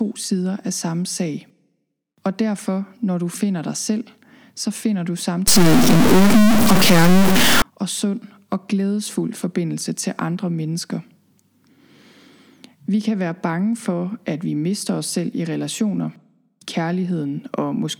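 From 5.48 to 7.62 s the speech turns harsh and buzzy, and pauses fill with noise. This is likely a stuck bit weighted at around -10 dBFS.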